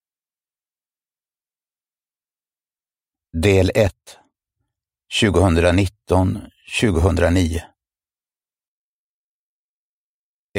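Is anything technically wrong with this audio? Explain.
Yes. A sudden gain jump occurs twice: from 3.88 to 4.34 s the level drops by about 12 dB, and from 8.68 s to the end it drops by about 6 dB. The sound and background noise step down together, likely from gain applied without a ramp.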